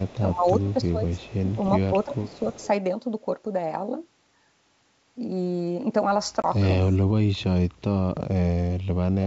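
From 0.04 to 0.2 s a faint copy of the speech trails the original by about a third of a second (329 ms). It returns at 0.68 to 0.74 s, 1.07 to 1.7 s and 2.03 to 2.68 s, at about 25, 35, 25 and 20 dB below the speech, so it is loudest in the last stretch. This is echo leak: the far end was likely on a loudspeaker, and its echo canceller let part of what its microphone heard travel back down the line.

Between 0.32 and 1.51 s the speech sags and thins in patches totalling roughly 0.7 s, dropping by up to about 15 dB. At 2.05 to 2.45 s it dips by about 20 dB. Later it cuts out much harder: by about 35 dB across 7.22 to 7.9 s, and by about 40 dB from 8.3 s to the end. This is speech suppressed in double talk. Both sides were likely talking at once, and the echo canceller, unable to separate the local talker from the loudspeaker echo, turned both down.

At 6.42 to 6.45 s there is a sharp-edged 20 ms gap, which fits about two lost packets. 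This is packet loss on an ADPCM call. When the speech resumes, it comes back briefly slightly distorted, because the decoder's predictor and step size have fallen out of step with the sender's. It settles within a few tens of milliseconds. The G.722 coding at 64 kbit/s is wideband and adds no more than faint damage of its own.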